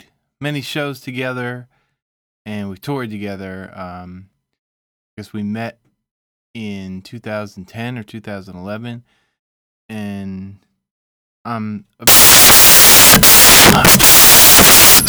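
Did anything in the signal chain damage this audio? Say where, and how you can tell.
Yes. The damage sits at the sample-format conversion stage: from 12.07 s, right after "I'm a", to the end of the clip at 15.09 s, the speech gives way to loud, harsh broadband noise. That is the signature of samples built from the wrong bytes. The reader has misaligned or reordered the bytes of each sample, so the rapidly fluctuating low-order bits land in the most significant positions and dominate every value.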